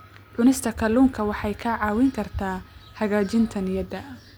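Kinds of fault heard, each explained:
No technical faults are audible.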